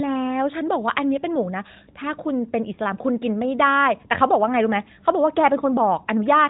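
No technical faults detected.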